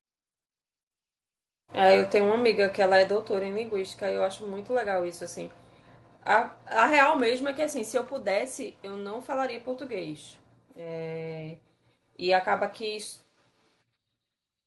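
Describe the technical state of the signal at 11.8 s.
At 11.8 s the speech signal is intact, with no audible fault at that moment.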